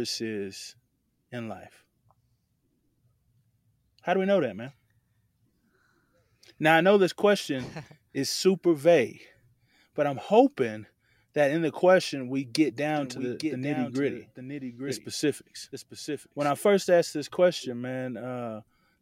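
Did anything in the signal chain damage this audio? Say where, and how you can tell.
Yes. From 12.96 to 16.50 s there's a doubled audio track: a clean, full-band copy of the speech trailing about a second behind, roughly 5 dB down, with no decay, switching on and off abruptly. That's likely a second, slower capture path mixed in at the driver or routing stage.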